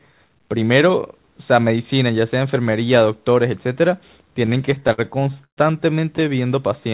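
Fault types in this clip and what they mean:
Repeated stalls (stutter): from 4.46 to 5.59 s, 15 holds of up to 129 ms make the speech drag, as late packets emptied the jitter buffer.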